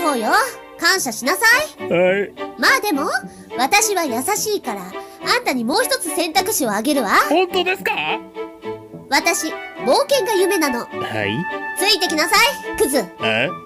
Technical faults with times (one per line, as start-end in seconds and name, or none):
5.74 overlap between stream segments